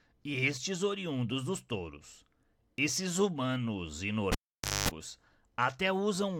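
A cable pulled and plugged in interrupts the speech from 4.32 s to 4.89 s. A pop marks the moment the live lead comes out, and the signal drops to near silence for about 520 ms. As the plug is pushed back, only its tip makes contact at first, so the ungrounded input picks up about 225 ms of 50 Hz mains buzz. A second pop follows when the connector seats fully and the speech returns.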